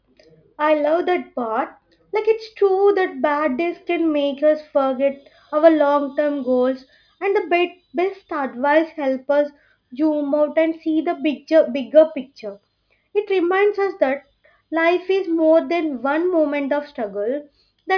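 Nothing technically wrong turns up anywhere in this bit of speech, so there's no fault to point to, no time to flag and no cause to chase.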